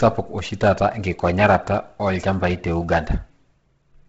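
Throughout the speech, likely heavy Bluetooth LC3 compression cuts everything above 7.8 kHz and leaves a breathy, grainy edge. A spectrogram shows a hard ceiling over blocky noise fill.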